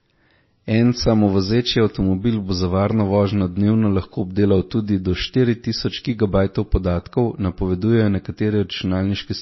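A speech recording with MP3 compression damage that is plainly audible for its whole length. The treble stops abruptly, so s sounds lose their edge, and weak detail warbles in and out with a watery, swirly quality, which fits a low bitrate around 24 kbps. On a spectrogram this shows as a hard, flat ceiling with speckled holes flickering between frames below it, most likely from the encoder starving its quieter frequency lines.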